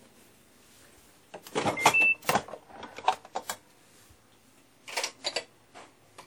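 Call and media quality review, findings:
WMA compression artefacts, whole clip, 0 to 6.26 s. Plainly audible ringing and washy smear on transients, with a hiss that swells and fades along with the sound. Likely a transform codec running long blocks, so quantisation noise spreads over tens of milliseconds and weak components get zeroed. Damage level fits a WMA encode around 48 kbps. Top end runs out near 19.9 kHz.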